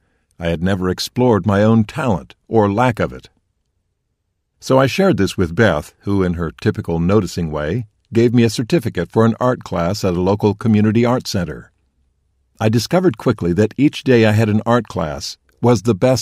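No technical faults can be heard anywhere in the audio.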